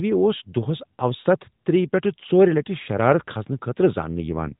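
From 4.15 to 4.56 s the speech turns rougher and more synthetic, consistent with an AMR rate drop from 12.2 to 5.9 kbps. The network cut the codec rate to protect bits, so the same narrowband band persists, without any gap.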